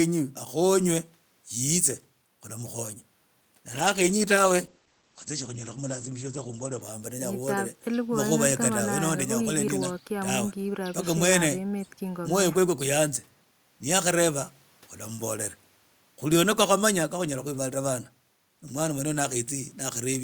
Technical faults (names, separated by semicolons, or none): call bitrate drop